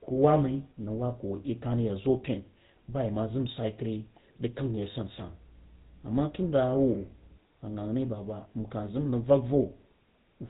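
Speech runs through the GSM full-rate codec for the whole clip. The voice sounds buzzy and gravelly. Nothing comes through above 4 kHz. The coder rebuilds the voice from a vocal-tract model fed by sparse regular pulses, which fits a 13 kbps stream. The damage is plainly audible.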